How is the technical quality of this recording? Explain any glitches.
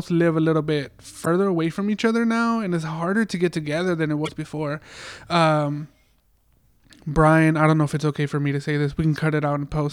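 The speech carries two brief glitches from damaged data in a compressed stream: one at 1.22–1.27 s, after "live a little bit" and before "away from each other", and one at 4.22–4.29 s, after "get together than it". Corrupted bytes make the decoder misread frames and hunt for the next valid header, producing a short chirp or squawk.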